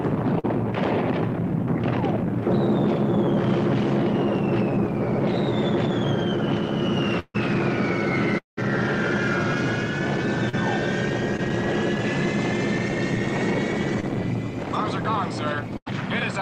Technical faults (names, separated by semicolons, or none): short concealed packet loss; burst of packet loss; long network dropout; scattered short gaps